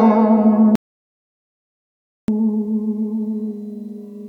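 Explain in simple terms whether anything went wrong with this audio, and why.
Something did go wrong: an audio dropout to silence. The music plays until 0.75 s, then stops abruptly and the recording goes completely dead until 2.28 s, when the music resumes mid-flow. That is about 1.5 seconds with no sound at all, not even the faint background you would expect between notes. The likely cause is that the input signal was briefly lost while the recorder kept writing silence, so whatever was played in that stretch is missing.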